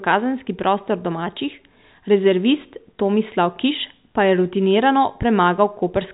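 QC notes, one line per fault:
No faults are heard in the clip. The speech carries nothing above 4 kHz, which fits G.711 telephone coding at 64 kbps, and any quantisation noise riding under it is faint at most.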